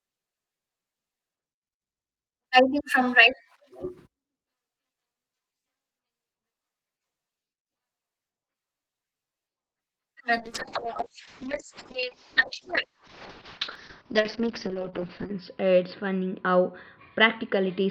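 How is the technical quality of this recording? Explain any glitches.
The recording has one clear fault. From 10.39 s to the end, a call bitrate drop from 64 to 6 kbps collapses bandwidth from 20 to 6 kHz, leaving the speech muffled and watery.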